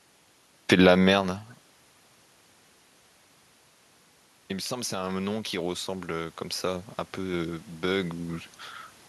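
A speech recording with one fault: automatic gain rising. From 4.68 s to 8.45 s, the voice and the room noise swell together, slowly. The input level had dropped by about 14 dB. The automatic gain control judged it too quiet and raised its gain by about 6 dB over nearly four seconds. Because the gain acts on everything, the background lifts along with the voice. The level shifts near 1 s and 8 s are the talker moving, not faults.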